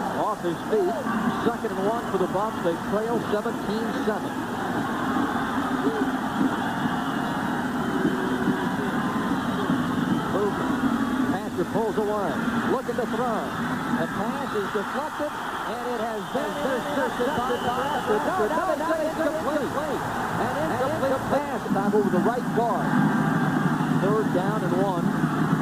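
From 16.37 to 21.39 s the audio doubles, a second full-band copy trailing about 300 ms behind at roughly equal level, clean and dry, switching in and out abruptly: a doubled audio track, likely from a second, slower capture path.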